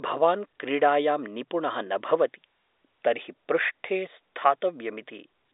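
No technical faults can be heard anywhere in the speech. What comes through is the narrow band of G.711 telephone coding, spanning 300 Hz to 3.7 kHz with nothing above 3.8 kHz, which gives the sound its fixed-line telephone character.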